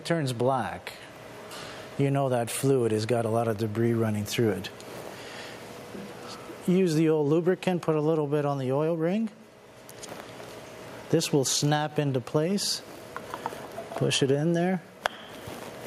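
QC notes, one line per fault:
Nothing stood out on listening.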